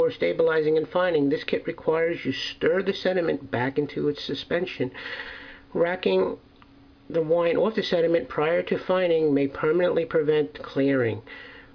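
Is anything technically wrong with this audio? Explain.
No, nothing technically wrong can be heard anywhere in this audio.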